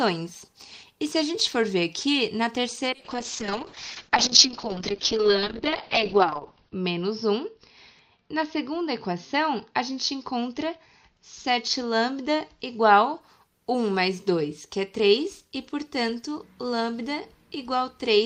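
From about 2.90 s to 13.27 s there's a call bitrate drop. The bandwidth estimate collapsed and the encoder had to squeeze everything into far fewer bits, which fits a fall from 32 kbps to 6 kbps. The top end gets chopped from 20 kHz down to 6 kHz, so the sound goes muffled and rough, with a watery smear at the worst point, a stretch of roughly 3.9 s, before the detail comes back.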